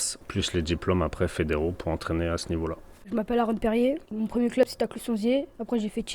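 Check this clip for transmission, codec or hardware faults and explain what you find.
Two short discontinuities are audible, at 3.02 s and 4.63 s. Each is the sound jumping ahead, no gap, about a hundredth of a second lost at the first and a few hundredths at the second. This is likely a dropped buffer (overrun), where unread input was overwritten and the surrounding audio spliced together.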